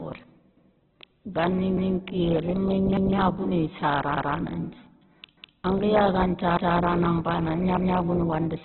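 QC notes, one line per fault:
Throughout, Opus compression. Nothing is heard above 4.2 kHz, so the speech is narrowband and dull. Tones sound rough, grainy and noisy, because the coder fills starved bands with noise. This likely comes from a heavily squeezed Opus stream, consistent with about 8 kbps.
0.57–0.77, 1.77–1.97, 2.97–3.17, 4.17–4.37, 5.37–5.57, 6.57–6.77 and 7.77–7.97 s, overlapping chunks. At each join a 200 ms piece plays twice. Each new chunk starts before the previous one ended. The joins recur every 1.2 s, so the stutter is regular.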